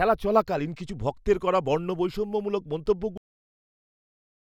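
From the start, the two channels are drifting apart: their clocks disagree by something like 40 ppm, so the inter-channel delay creeps to a fraction of a millisecond and mono sums pick up a slow flange. At 0.90 s, just before "ভক্তের করা বর্ণবৈষম্যমূলক", there's an overlap between stream segments. The player trims a few milliseconds it wrongly thinks are doubled, and the waveform jumps. The same thing happens again at 2.86 s, right after that phrase, about two seconds later, which fits the segment spacing. Then at 3.18 s, still just after "ভক্তের করা বর্ণবৈষম্যমূলক", we get a cut-off end. The final buffers never made it out, so the sound stops mid-flow and drops straight into digital silence with no decay.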